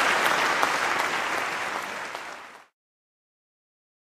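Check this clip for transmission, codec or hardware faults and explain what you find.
Nothing stood out on listening to the clip.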